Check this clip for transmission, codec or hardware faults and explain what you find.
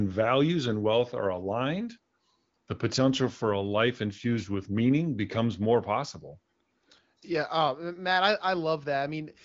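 No faults found; the speech shows the band limit near 7.6 kHz typical of AMR wideband (HD Voice) coding at a high rate, with at most faint coding damage.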